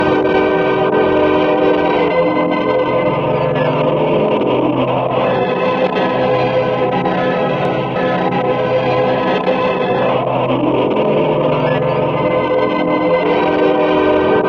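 At 7.65 to 7.69 s a single loud pop cuts across the sound, peaking roughly 5 dB above the surrounding level and lasting under 40 ms. It is most likely a sudden voltage step or pulse entering the signal path, such as from a connector being disturbed, a switch or a static discharge, which the following circuitry shaped into a short, sharp transient. It is heard as one abrupt thump laid over the recording, with the sound continuing unbroken underneath.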